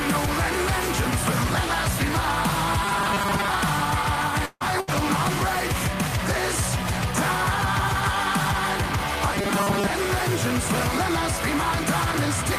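From 2.85 to 3.54 s the sound turns into a rigid, metallic buzz: robotic sound from repeated short buffers. Fresh audio likely arrived too rarely, so the playback side kept replaying its last few milliseconds and discarded roughly half the real material. The buzz sits at 200 Hz, which fits a loop of about 5 ms. On a spectrogram this looks like evenly spaced horizontal harmonic lines at multiples of 200 Hz, and the waveform repeats almost identically every 5 ms.

A long network dropout begins at 4.45 s. The receiver likely stopped getting packets and covered the gap by stretching the last sound for about 150 ms into a fading buzz or hiss, ending in about 30 ms of near-silence. Roughly 140 ms of the original is gone, and the sound resumes further along. On the waveform the envelope decays smoothly into a flat stretch. The spectrogram shows frozen, smeared bands that thin out into a dark gap before normal texture returns.

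Three single 20 ms packets were lost but rebuilt from error correction, at 4.60, 4.87 and 4.93 s. The following packet carried a low-bitrate backup copy, so nothing drops out. Each patch sounds briefly rougher and grainier. On a spectrogram each shows as a narrow vertical strip with a duller, noisier texture.

A burst of packet loss runs from 4.80 to 4.89 s. Several consecutive packets went missing, and the decoder filled about 70 ms by extending the previous sound while fading it down. About 60 ms of the real audio never plays, so the sound jumps ahead when it resumes. The waveform shows a short decaying tail and then an abrupt resumption. The spectrogram shows a brief smeared, stationary patch between normal regions.

The robotic buffer repetition returns from 9.34 to 9.92 s with the same 200 Hz buzz, the same 5 ms comb of harmonics, and about half the material skipped.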